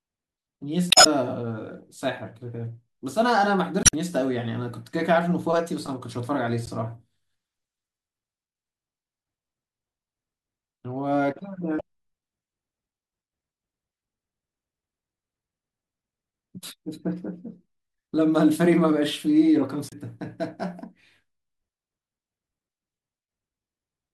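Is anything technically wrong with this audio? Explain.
Yes. The speech is interrupted by damaged data in a compressed stream at 0.88–1.07 s, 3.82–3.95 s, 6.66–6.69 s, 11.76–11.81 s and 19.89–19.94 s. Each time, corrupted bytes cause the decoder to misread frames and lose sync until it finds a valid frame header. The result is a short chirp, squawk, click or hole lasting from about 30 ms to nearly 0.2 s. On a spectrogram each one is a sudden smeared patch or gap, and on the waveform it is an abrupt break.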